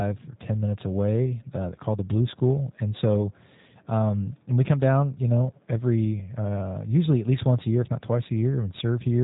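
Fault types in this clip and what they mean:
G.729 codec: speech squeezed through a low-rate VoIP coder, consistent with G.729A at 8 kbit/s, which rebuilds each 10 ms frame from a vocal tract model, pitch prediction and a few pulses, so it sounds plainly rough and synthetic throughout. A spectrogram shows everything cut off above 3.8 kHz.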